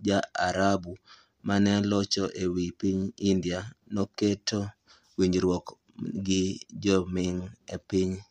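Nothing in this bit of speech stands out as a technical problem; there's no fault to point to anywhere along it.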